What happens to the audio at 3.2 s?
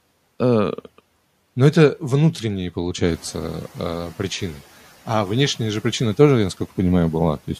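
At 3.2 s the noise suppressor is catching up. Room noise jumps about 11 dB around 3 s, after "это внутренние", and from 3.03 to 3.32 s it leaks through before sinking about 5 dB by "э причины". Unlike repeated pumping, it settles once.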